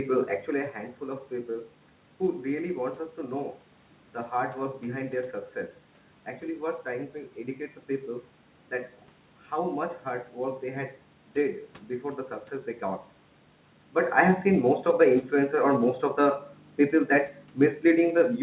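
No technical faults are audible.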